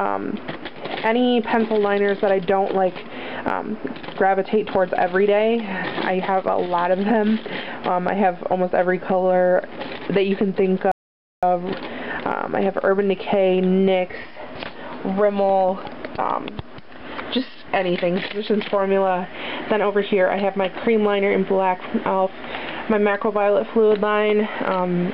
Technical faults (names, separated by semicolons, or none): rebuffering stall